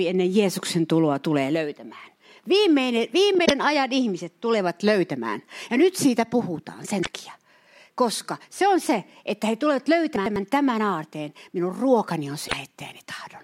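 Damaged data in a compressed stream first appears at 3.42 to 3.51 s, just before "ajan ihmiset tulevat löytämään". Corrupted bytes in the encoded speech make the decoder misread those frames, lose sync and hunt for the next valid frame header. The result is a brief glitch lasting under a tenth of a second. The same damage recurs at 7.00 to 7.07 s, right after "nyt siitä puhutaan", and again at 12.45 to 12.53 s, each time as a similar short glitch.

Chunks out of order occur between 10.16 and 10.36 s, after "se että he tulevat" and before "tämän aarteen". A 100 ms chunk of audio arrived one chunk late, so it plays after the chunk that should have followed it. No audio is lost, but the sequence is swapped, leaving three hard joins. It is heard as a jumbled stumble lasting about a fifth of a second.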